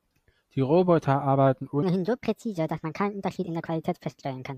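From 1.83 s to the end, a section at the wrong speed plays the speech about 1.36 times too fast, likely from the wrong playback clock, lifting pitch by roughly five semitones. Unlike a pitch shift or time-stretch, tempo and pitch jump together, hurried and high.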